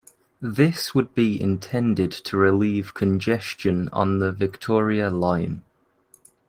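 Opus voice compression runs through the whole of this speech clip, and its damage is plainly audible. The codec is working in hybrid mode: a linear-prediction SILK layer carries the speech up to 8 kHz, and a transform CELT layer fills in the full band above that. The degradation fits a low rate of around 16 kbps. At that rate the excitation signal is coded coarsely, which leaves the speech hoarse and slightly robotic.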